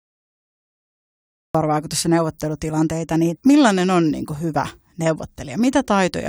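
From 0.0 to 1.55 s there is only digital silence. At 1.55 s the speech starts abruptly, mid-sound, with no attack or fade-in. This is a cut-off start. Capture began late, so the opening of the sound was lost and the entry is hard.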